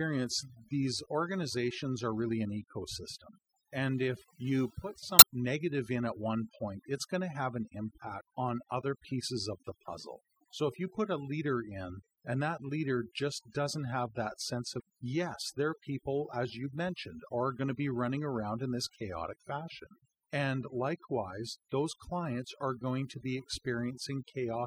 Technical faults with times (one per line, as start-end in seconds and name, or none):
0.00-24.66 overdone noise removal
0.00-24.66 MP3 compression
5.16-5.23 damaged data in a compressed stream
14.77-14.80 damaged data in a compressed stream